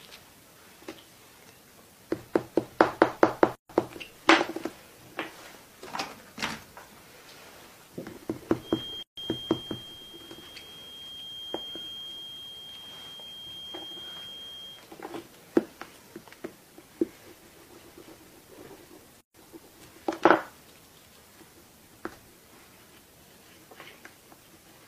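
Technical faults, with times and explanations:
3.55 s, 9.03 s and 19.21 s, gap at a join of encoded pieces: continuous sound drops into silence three times, for about 142 ms, 147 ms and 138 ms, then resumes exactly where it stopped. Each piece was encoded on its own and joined untrimmed, so the encoder's start-up delay and the padding of the previous piece's final frame both remain as dead air. The codec smears the edges, so the fully silent part is a little shorter.
8.57–14.87 s, feedback whistle: a thin, steady tone near 3.2 kHz sits behind the sound for about six seconds, roughly 10 dB below it, swelling and fading slowly in level without growing. The likely cause is a loudspeaker-to-microphone loop held right at the edge of feedback, where one high frequency keeps recirculating but never gains enough to run away.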